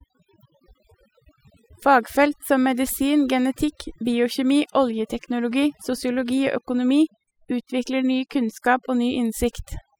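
From start to finish the pauses fall to near silence dotted with twinkling specks. This is overdone noise removal: a noise reduction pass set too hard, pushing individual frequency bands down whenever they sit near its noise estimate, taking quieter parts of the voice along.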